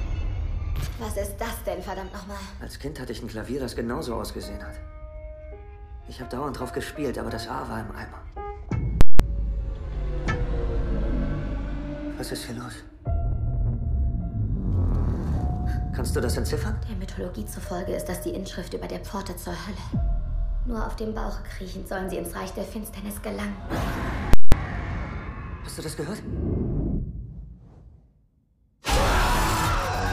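At 9.01 s and again at 24.33 s, invalid numbers at full scale take over for about 0.19 s each. A calculation blew up, and the output pinned to one extreme value. Each event is a loud pop, silence, then another pop. The length fits an 8192-sample block.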